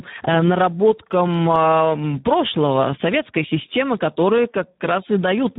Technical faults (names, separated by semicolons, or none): Speex codec; CD scratch ticks